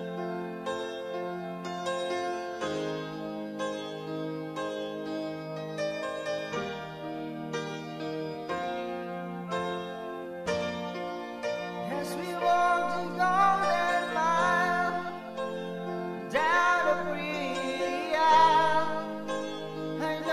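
Nothing goes wrong anywhere in the audio, with no dropouts, glitches or other technical faults turning up along the way.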